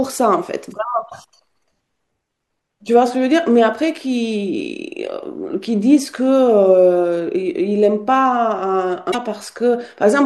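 At 9.11 to 9.15 s the speech jumps forward through a garbled glitch of about 44 ms, under two 26 ms frames, seen as a brief smear breaking the spectrogram's harmonics. The likely cause is a broken MP3 bit reservoir, where frames decoded with another frame's borrowed bytes after a cut.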